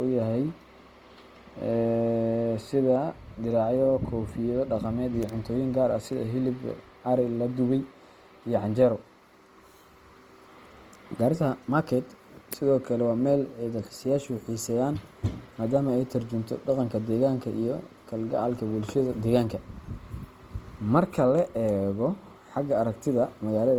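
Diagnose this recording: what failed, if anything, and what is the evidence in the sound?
At the codec stage, the speech was likely taken from a low-bitrate encode, such as Opus at around 24 kbit/s, and re-saved as high-bitrate MP3, which fits a 192 kbit/s file. Throughout, the first encoding's coarse, smeared texture remains, under a final cut-off near 20.2 kHz.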